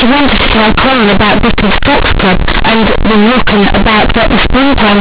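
From start to finish this speech is companded audio read as linear: A-law bytes are being played as raw 8-bit samples with no expansion. So every sign flip jumps across half the range, quiet bits blow up to full size, and you get loud, buzzy distortion with heavy noise in the pauses.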